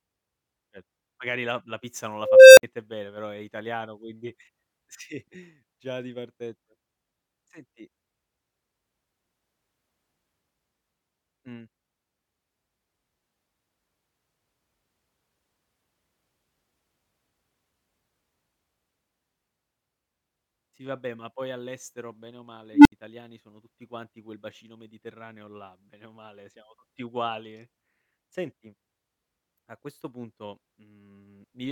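An unstable filter hits at 2.17 s, after "la la pizza non": a tone near 500 Hz swells for about 0.4 s, then drops to 58 ms of silence. At 22.73 s, after "poi all'estero bene o", a tone near 300 Hz builds in 0.12 s, then 70 ms of silence. A recursive filter's bad coefficients let its output grow until it overflowed and reset. Unlike feedback howl, each tone ends in an abrupt dropout.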